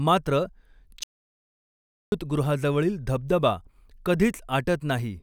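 Audio dropout to silence from 1.03 to 2.12 s: the speech cuts to silence with no room tone for about 1.1 s, likely from a lost input.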